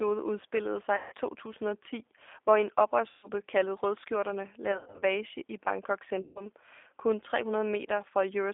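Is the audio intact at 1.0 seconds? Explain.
No. From 0.96 to 1.14 s, VoIP packet loss concealed by the speech codec leaves about 160 ms missing, which fits around sixteen 10 ms frames. The decoder fills the gap by repeating its last pitch and filter at falling gain, so the speech smears into a fading buzzy tone or coloured noise and stays weak briefly after packets resume.

Underneath, the G.729 codec (G.729A, 8 kbit/s) is active throughout. It models speech from a filter, a pitch predictor and a few pulses, within a line band of 300 Hz to 3.6 kHz. This makes the speech plainly rough and synthetic-sounding, with nothing above 3.6 kHz.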